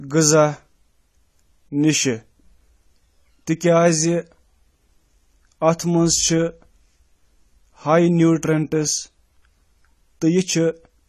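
AAC compression runs throughout this 11-second speech clip: nothing is present above 13.4 kHz, and the speech sounds dull and smeared with a fizzy, warbling edge on sibilants. This is likely AAC-LC quantising the spectrum coarsely against a hearing model, which fits a bitrate around 32 kbps.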